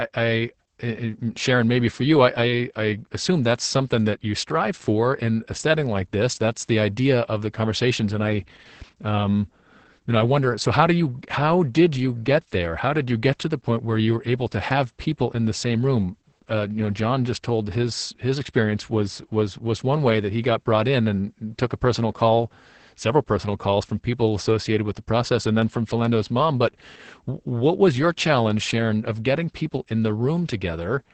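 Opus voice compression throughout: a starved SILK coder, consistent with about 10 kbps, removes everything above 8.6 kHz, leaving the speech muffled, hoarse and faintly robotic.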